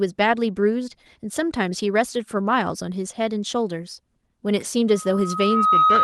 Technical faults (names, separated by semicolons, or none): loudspeaker feedback squeal